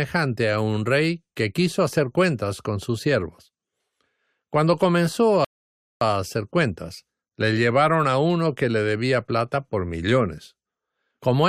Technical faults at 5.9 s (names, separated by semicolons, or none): rebuffering stall